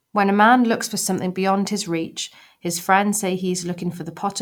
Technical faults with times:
none

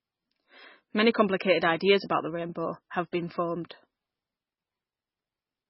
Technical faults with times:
0.00-5.69 MP3 compression

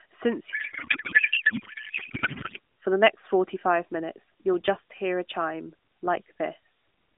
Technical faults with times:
0.52-2.59 codec payload misread

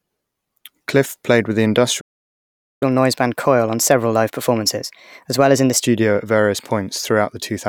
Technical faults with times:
2.00-2.83 playback stall
2.83-5.83 catch-up at higher speed

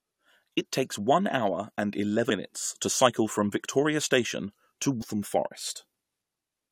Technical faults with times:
2.29 damaged data in a compressed stream
5.00-5.03 damaged data in a compressed stream

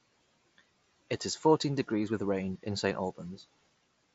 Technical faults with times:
none

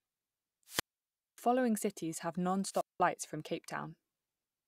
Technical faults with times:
0.66-1.38 wireless microphone squelch dropout
2.69-3.00 wireless microphone squelch dropout

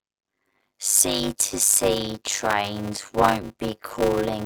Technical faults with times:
0.00-4.46 block size mismatch (padded)

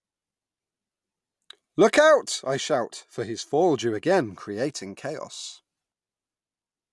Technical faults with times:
none

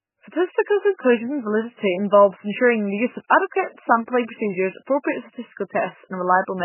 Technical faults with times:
0.00-6.64 MP3 compression

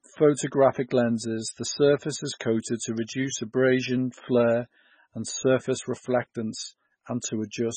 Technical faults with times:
0.00-7.76 MP3 compression

